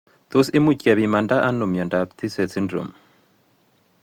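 Throughout, the speech sounds swirly, hollow and smeared, with blurred attacks. This is likely generation loss: several lossy passes, consistent with repeated Opus coding near 64 kbit/s.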